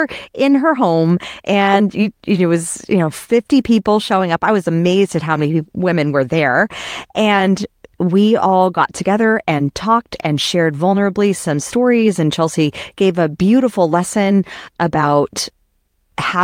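Speech recording, no technical faults detected anywhere in the clip.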